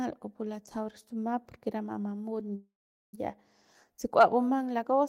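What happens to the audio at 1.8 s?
At 1.8 s the speech plays through intact, with no dropout, click or distortion at that moment.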